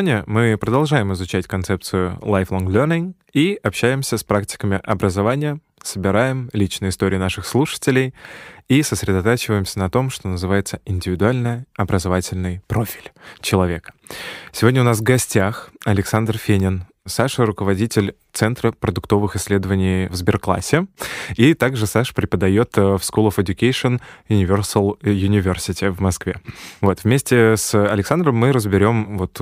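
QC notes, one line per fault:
No faults heard anywhere in this speech recording.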